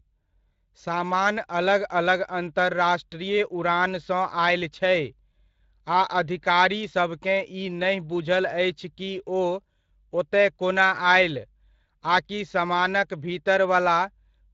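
Across the whole speech clip, Speex codec damage is plainly audible: a hoarse, noisy grain from the starved CELP excitation, with the band above 8 kHz reduced to shaped hiss. The steady roughness, without warbling or dropouts, separates it from transform-codec swirl or packet loss, and fits a setting near 20 kbps.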